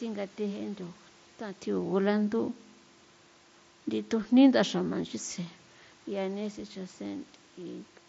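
No technical faults can be heard in this speech recording.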